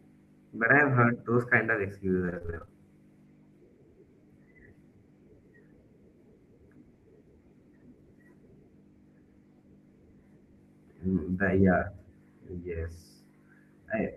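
From 2.25 to 2.69 s the speech breaks into repeated packet loss, a robotic, choppy stretch. Eleven short gaps, none longer than 24 ms, are each patched by stretching the previous sound, so about half the span is concealment. On a spectrogram, harmonics smear into repeated blocks between missing slices.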